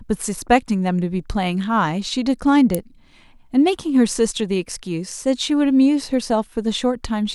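At 2.75 s a single sharp snap cuts across the speech, an electrical switching spike peaking near -5 dBFS, likely from a nearby switch or discharge arcing into the audio line. Unlike a dropout click, the speech continues underneath without any gap.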